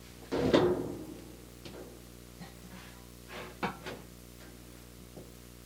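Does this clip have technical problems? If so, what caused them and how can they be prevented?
Yes. A screen or video cable coupled into the audio path, laying a video or display buzz at 60 Hz with hash above it across the whole clip, about 15 dB below the sound. Rerouting audio cables away from displays and video leads, and using shielded, balanced connections, prevents it.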